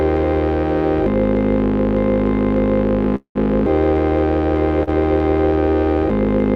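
A piece of music in which, at 3.15 s, the sound suddenly hangs: the last moment is drawn out as a fading buzz that sinks to near silence for about 90 ms before the music picks up again at 3.37 s, exactly where it left off. That pattern is a call audio freeze, likely from packets held up in transit so the jitter buffer emptied. The receiver filled roughly 198 ms with concealment, adding the same amount of delay while dropping nothing. A much smaller hiccup follows at 4.83 s, where a sound is held slightly too long with a faint dip before the music resumes at 4.89 s. This is a short stall from a late packet: one packet missed its slot, and the receiver stretched the previous audio for about 39 ms until it arrived. Nothing was lost, but the timing shifted later by that much.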